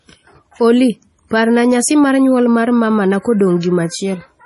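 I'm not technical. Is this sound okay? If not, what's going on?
No. All the way through, the speech sounds watery and swirly, with metallic chirps on s sounds and nothing above about 11.5 kHz. That points to heavy MP3 compression as the likely cause. Unlike simple muffling, the faint details flicker on and off.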